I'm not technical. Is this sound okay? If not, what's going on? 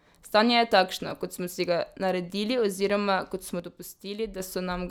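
No. From 3.60 to 4.40 s, just after "ga naredili oziroma kot", the speech suddenly becomes noticeably quieter, then recovers. This is a case of one channel dropping out, most likely one of the two stereo sides briefly cutting out.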